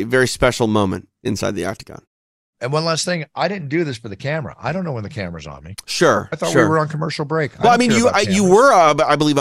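Nothing goes wrong anywhere in this speech, and the background simply drops away to silence in the pauses before coming back in time for the next phrase.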